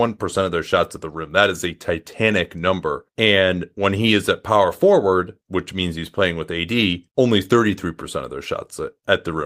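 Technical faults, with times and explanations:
No technical faults can be heard anywhere in this speech.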